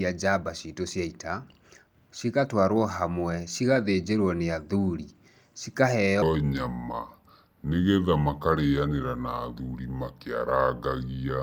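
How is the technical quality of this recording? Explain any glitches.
One glitch stands out: a section at the wrong speed. From 6.22 s to the end, the speech plays at about 0.76 times its recorded rate, likely because that stretch was fitted to the wrong clock, so pitch drops roughly five semitones while delivery drags. Unlike a pure pitch shift, timing and pitch change together, so syllables lengthen as the voice deepens.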